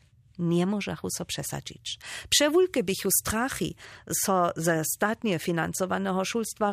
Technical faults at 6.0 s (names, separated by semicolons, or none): none